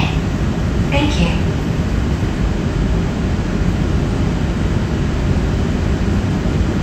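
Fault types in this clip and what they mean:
No audible faults detected.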